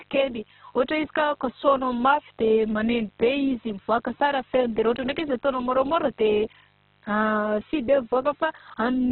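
A mains buzz runs through the whole recording: switching spikes from a dimmer, rectifier or unshielded lead have leaked into the signal path twice per cycle of the 50 Hz supply, and their harmonics climb well up the spectrum. The result is a steady, raspy buzz sitting under the speech at roughly 40 dB below it, quiet but constant.

From start to finish the audio is also heavily damaged in a way that points to Opus compression, most likely in its CELT music mode at a very low rate, which fits something around 8 kbps. Short of bits, the encoder has narrowed the bandwidth to narrowband and filled weak bands with folded or noise-like content, so nothing survives above about 4.2 kHz. The speech sounds dull and boxed-in, and its tonal parts turn grainy, rough and noisy rather than swirling.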